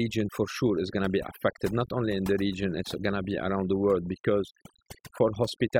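A speech recording with overdone noise removal running the whole way through. The noise reduction was pushed too hard, so any frequency band sitting close to its idea of the noise gets clamped way down or switched off entirely, and the quieter parts of the voice get caught in that too. You hear it as an eerily dead background sprinkled with little twinkly specks.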